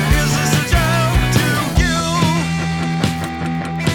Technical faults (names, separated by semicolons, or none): Wi-Fi interference